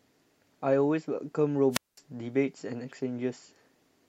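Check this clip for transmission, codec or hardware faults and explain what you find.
One fault is present, a wireless microphone squelch dropout from 1.71 to 1.99 s. The FM radio link fades, hiss rises briefly, and the receiver's squelch then mutes the output, leaving about 0.21 s of near silence before the speech returns.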